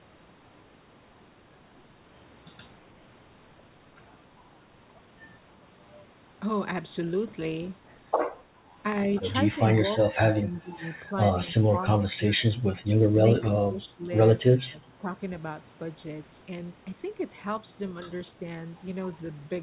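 Speech suppressed in double talk occurs six times: 10.09–10.2 s, 10.39–10.82 s, 11.69–12.43 s, 13.42–13.48 s, 13.65–14.03 s and 14.56–15.05 s. The talker's level sinks, by about 25 dB in the first dip, about 15 dB in the second and about 20 dB in the rest, so syllables thin out or vanish in pieces. This is likely an echo canceller failing to separate the local talker from the loudspeaker echo during simultaneous speech and attenuating everything.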